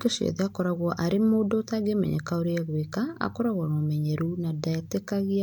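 Nothing stood out on listening to this speech recording.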